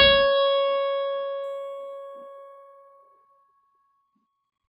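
From 1.44 s to the end at 4.71 s, the music turns dull at the top while a faint metallic shimmer rides over its brighter sounds. This is imaging from linear upsampling. The audio was raised from 11 kHz to 44.1 kHz by joining samples with straight lines, and that weak filter lets a mirrored copy of the 0 to 5.5 kHz content leak into the 5.5 to 11 kHz band, roughly 40 dB below the music.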